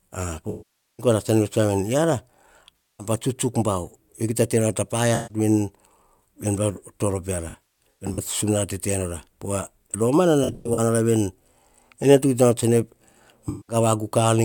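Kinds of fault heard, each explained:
AAC frame loss with concealment: six patches of about 0.15 to 0.49 s are filled from the last good spectrum, sounding smeared and phasey instead of cutting to clean silence like a plain dropout; near 7.5 s and 10.4 s it arrives in scattered bursts.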